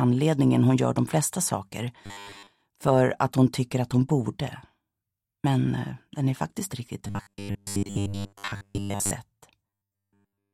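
From 2.06 to 2.49 s, again from 7.07 to 9.11 s, and from 9.68 s to the end, the sound takes on a robotic quality from repeated short buffers. A fixed 100 Hz buzz sits over it, which fits a 10 ms block being looped because new audio arrives too late, likely a starved buffer. In the first two spans most of the material is repeats; in the last, all of it is, so the buzz there is constant and metallic.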